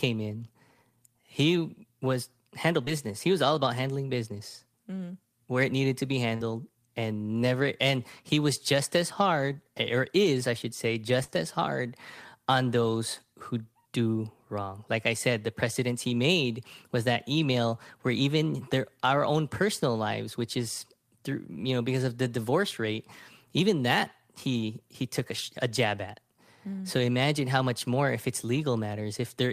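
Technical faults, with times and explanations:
2.85–2.89 s, 6.36–6.42 s and 11.24–11.30 s: short concealed packet loss. Packets carrying about 20 ms of audio after "he was handle", and about 40 ms each after "it needed to be" and "is I should say", never reached the decoder in time. The receiver stretched the preceding sound across each gap and blended back, so each gap comes out as a brief smear or wobble.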